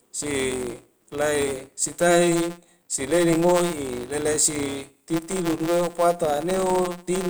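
Filter restarted on every block, throughout the speech: a steady buzz at 172 Hz rides under the audio from start to finish. The filter discards its memory at each block boundary and begins again from silence, so every block opens with a tiny transient. Those clicks repeat at the block rate, which fits a 256-sample block, and because each one scales with the signal, the buzz rises and falls with the level of the speech.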